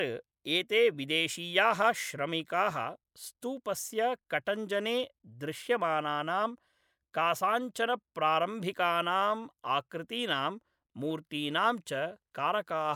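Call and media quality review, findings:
No faults found in the speech recording. No audible event to attribute to any capture, transport or playback component.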